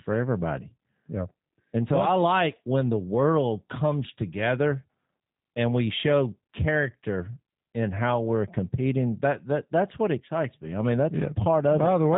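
From start to finish the speech carries G.729 codec damage. The sound is resynthesised from a vocal tract model, a pitch predictor and a few pulses per frame, which fits an 8 kbit/s stream. Nothing survives above 3.8 kHz, and the speech sounds plainly buzzy and artificial.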